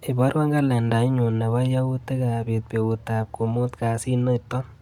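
Speech, with Bluetooth LC3 compression audible all the way through as a breathy, grainy edge where the upper spectrum has been thinned and noise-filled. The band still reaches 20.1 kHz, and the damage is likely from LC3 at around 48 kbps with 10 ms frames.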